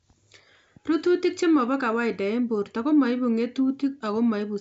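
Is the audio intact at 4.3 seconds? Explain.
Yes, the audio is intact at 4.3 seconds, with nothing there beyond the faint light upper-band hiss that 64 kbit/s G.722 wideband telephone coding can leave on speech.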